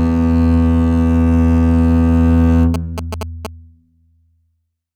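From 2.74 to 3.47 s, a galloping dit-dit-dit of short buzzes cuts across the music, pitched near 217 Hz and sitting roughly 10 dB below it. These are GSM signalling bursts: a nearby 2G phone was sending short groups of radio bursts, as it does when a call or text is being set up. The audio circuitry rectified that RF, turning the 217 Hz burst rhythm into audible buzzing.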